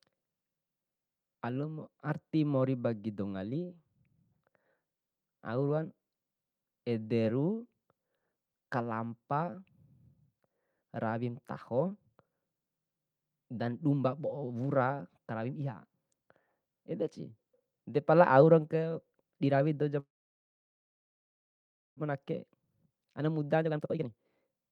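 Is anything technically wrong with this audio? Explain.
Yes, the speech has two related faults near the end.

A call audio freeze runs from 19.99 to 22.00 s, right after "dirawi dou". The likely cause is packets being held up in transit until the receiver's jitter buffer ran empty. The receiver briefly stretched the last sound, then went silent for about 1.9 s of the roughly 2 s gap. When the packets arrived, the speech resumed where it had stopped. Nothing was lost, but a pause was inserted and the delay grew by nearly 2 s.

A jitter buffer speed-up follows from 22.07 s to the end of the clip at 24.72 s. The late packets arrived together and overfilled the buffer, so the receiver repeatedly cut short pieces, each one or a few pitch periods long, to bring the delay back down. In total it removed roughly 0.7 s. The speech plays at about 129% speed with its pitch unchanged, which makes it sound rushed.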